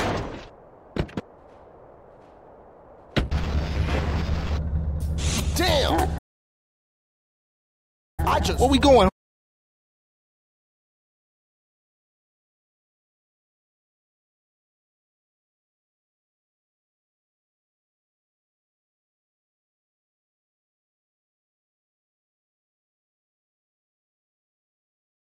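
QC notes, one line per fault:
6.18–8.20 s, playback stall: the sound cuts out mid-flow for about 2 seconds, likely the player running dry of data or its thread getting blocked.
8.20–11.20 s, time-compressed catch-up: the player trims its backlog by cutting and cross-fading small slices, so it runs about 1.15x fast at normal pitch.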